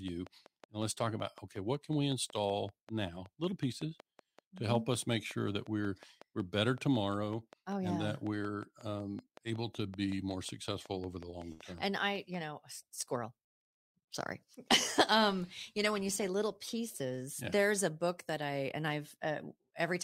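A train of clicks runs through this speech clip from 0.08 s to 12.35 s, ending just before "know squirrel": some seventy similar pops at a regular 5.4 per second, rising a few decibels above the speech. The likely source is interference or a faulty connection or supply.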